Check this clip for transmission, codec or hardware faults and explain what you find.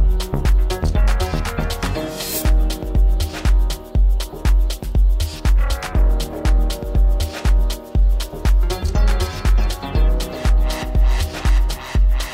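Nothing faulty turns up anywhere in this recording.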